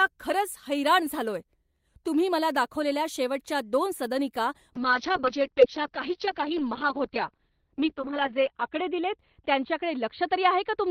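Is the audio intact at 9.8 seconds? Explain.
No. A call bitrate drop runs from 4.76 s, just after "दाखवलेल्या शेवटच्या दोन सदनिका", to the end of the clip. The encoder falls from 32 to 7 kbps and narrows the band from 20 kHz to 4 kHz, so the speech at 9.8 s sounds coarse, watery and muffled.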